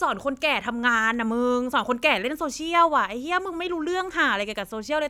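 Listening to the speech here, nothing stood out as a technical problem at any point.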